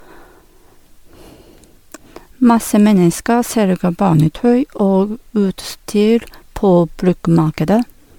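For the whole clip, the speech was likely decoded and re-encoded around four times through a lossy codec, in a way that fits MP3 at 96 kbit/s. Each pass requantises on a shifted frame grid, so this generation loss sounds swirly, hollow and smeared, with blurred attacks.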